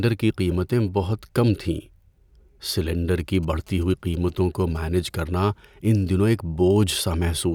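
From about 3.20 to 4.77 s there's a burst of GSM signalling interference, right before "کرنا ان دنوں ایک": a nearby 2G phone handshaking with its network, its radio pulses rectified by the audio circuit into a galloping dit-dit-dit of short buzzes at 217 Hz, sitting roughly 30 dB under the speech.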